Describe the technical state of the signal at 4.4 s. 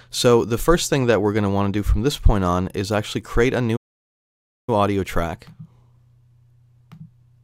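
At 4.4 s the output is silent, inside a playback stall running from 3.76 to 4.69 s, about 0.92 s. The player was likely starved of data or blocked. Unlike a brief dropout, the sound halts for nearly a second before resuming.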